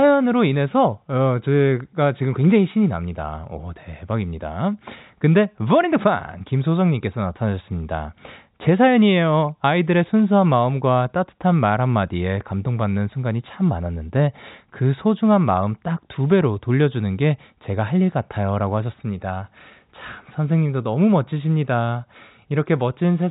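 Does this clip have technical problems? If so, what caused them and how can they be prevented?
No, nothing stood out on listening to this speech clip, so there is nothing here that needs preventing.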